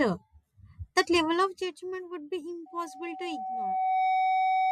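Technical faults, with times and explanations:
2.66 s to 4.71 s, loudspeaker feedback squeal: a single tone at 753 Hz appears and swells over roughly a second and a half, ending up about 10 dB louder than the speech and lasting to the end of the clip. The microphone is picking up the loudspeaker it drives, and at 753 Hz the loop gain exceeds one, so that frequency keeps feeding on itself. A steady hum or interfering tone would sit at a fixed level from the start, but this one grows on its own.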